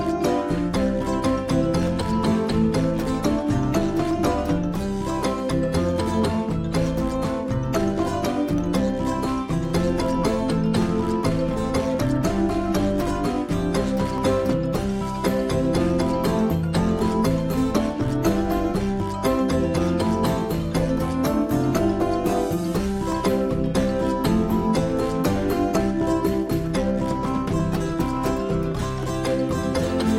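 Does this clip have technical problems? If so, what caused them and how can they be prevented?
Yes. Clock drift buffer slips: two devices likely on separate clocks about 300 ppm apart drop or repeat small sample blocks, clicking every 1.12 s from 0.76 to 29.84 s. Syncing both devices to a single shared clock, or putting asynchronous sample-rate conversion between them, prevents this.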